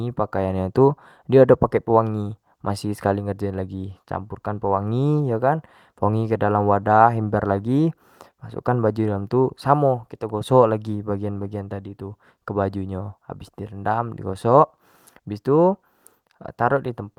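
No technical faults can be heard anywhere in the speech recording, and the signal stays stable and intact throughout.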